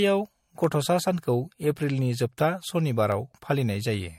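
Right from the start the speech has that swirly, hollow quality, with consonant attacks smeared and nothing above 16.6 kHz. That's generation loss, most likely from the audio going through MP3 a few times, at something that fits a 64 kbit/s chain. Each decode and re-encode quantises on a fresh frame grid, so the noise and spectral holes pile up and it sounds worse than a single pass at that rate would.

From 0.64 s to 3.94 s there's a regular click every 0.82 s, about five in all. These are clock drift buffer slips. Two clocks that likely disagree by a couple of hundred ppm let the buffer between them creep until a handful of samples get dropped or repeated, and each jump lands as a tick. The steady spacing is what gives it away.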